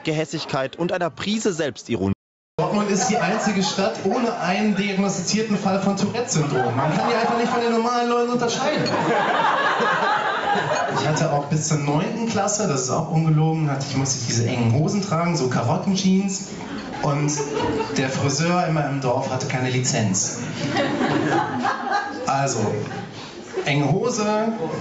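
Right from the start there's gain pumping, with a swing of roughly 25 dB. That's likely the input gain set way too high with a fast limiter clamping down on each peak, so everything comes out squashed.

At 2.13 s there's an audio dropout to silence lasting about 0.46 s, until 2.59 s. The sound just stops dead, with no room tone at all, then picks up again mid-flow, and whatever happened in that stretch is gone. The likely cause is the input being lost briefly while the recorder kept writing silence. Throughout, the top end stops at 8 kHz, as you'd expect from the call path.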